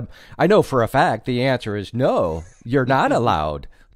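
Nothing goes wrong in this bit of speech; there's no technical fault to point to anywhere in it.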